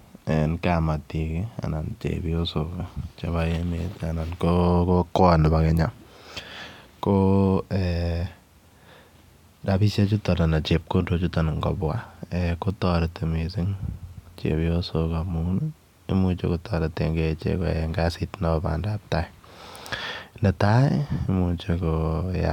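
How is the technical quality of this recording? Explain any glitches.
The technical quality holds up, with no glitches to explain.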